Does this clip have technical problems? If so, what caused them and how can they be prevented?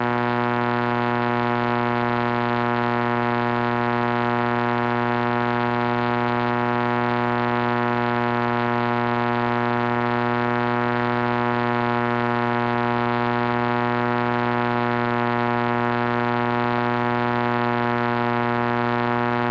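No, this clip has no technical problems, so there is nothing to prevent.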